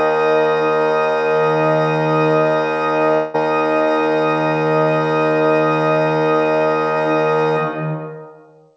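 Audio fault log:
3.14–3.36 s, long network dropout: the sound turns into a fading buzz for about 0.2 s, then resumes with that stretch skipped. This is likely a run of lost packets, concealed by stretching the last sound, on a call path with nothing above 8 kHz.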